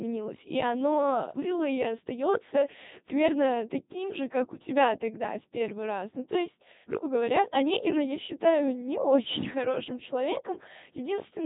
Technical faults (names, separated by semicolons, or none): Codec 2 vocoder